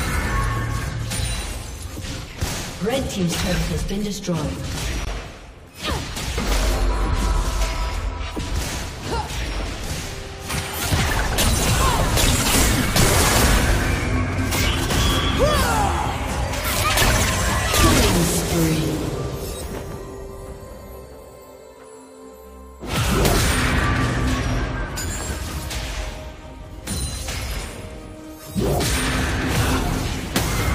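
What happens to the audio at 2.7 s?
Nothing goes wrong at 2.7 s; the audio plays through that moment intact, with no fault to be heard.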